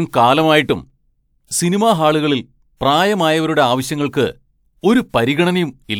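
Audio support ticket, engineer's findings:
No audible faults found; nothing to escalate.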